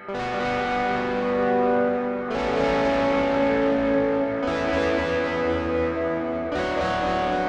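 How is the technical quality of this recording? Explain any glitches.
Listening to the music here, nothing stood out as a technical problem.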